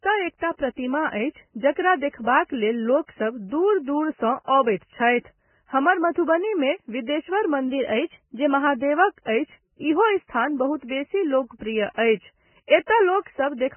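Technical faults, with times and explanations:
throughout: Vorbis compression, likely at a bitrate near 10 kbps; heavily damaged, hissy, grainy sound, and a spectrogram shows nothing above 3 kHz, with speckled, blotchy harmonics.
7.68–8.67 s: drift correction step, likely from clock-matching; playback runs 5.5% fast, pitch rises 93 cents, and a spectrogram shows harmonics jumping up, then snapping back.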